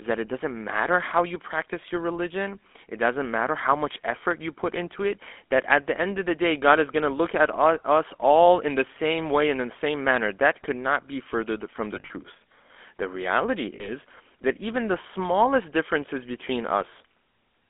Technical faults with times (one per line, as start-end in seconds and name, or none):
0.00-17.69 GSM full-rate codec
11.94-12.11 lost GSM frames
13.76-13.93 lost GSM frames